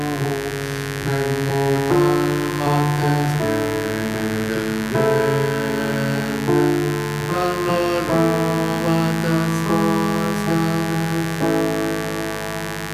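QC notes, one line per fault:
Throughout, mains buzz: a steady, raspy buzz sits only about 10 dB below the wanted sound. Switching spikes from a dimmer, rectifier or unshielded lead arrive twice per 50 Hz cycle, spraying harmonics of 50 Hz up into the kilohertz range.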